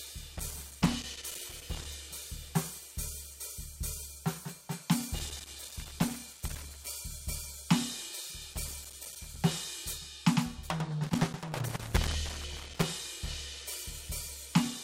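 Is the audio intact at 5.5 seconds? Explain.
No, 5.5 seconds falls inside a burst of loose connector crackle running from about 5.19 to 6.87 s. A worn or dirty contact keeps making and breaking, chopping the music, so you get an irregular scratchy crackle there.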